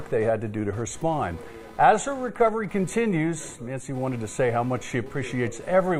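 Computer activity noise runs through the whole clip. A buzzing, chirping layer sits about 25 dB below the sound, pulsing at roughly 300 Hz. Changing load from the computer's processor or graphics shifts the shared audio ground. The noise follows that activity, not the sound.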